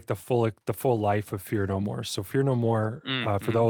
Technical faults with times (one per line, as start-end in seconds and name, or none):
none